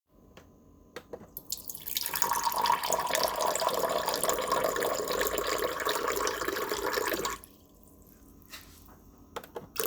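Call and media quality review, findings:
No faults found in this recording of sounds. Nothing requires follow-up on this ticket.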